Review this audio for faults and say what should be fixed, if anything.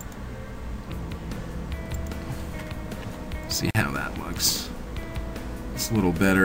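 A 43 ms gap at a join of encoded pieces opens at 3.71–3.75 s. Separately encoded segments were joined with encoder delay and end padding left in, producing a silence with smeared edges. Prevent it by trimming encoder delay and padding, or encoding the audio in one continuous pass.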